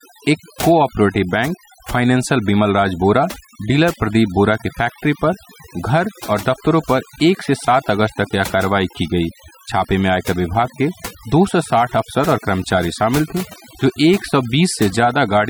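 Overdone noise removal runs through the whole recording. A noise reduction stage set far too aggressively has pushed individual frequency bands down or out whenever they came close to its noise estimate, taking the softer parts of the voice along with the noise. Between phrases the background drops to near silence scattered with twinkling specks. Unlike a plain dull filter, the loss flickers band by band rather than cutting evenly.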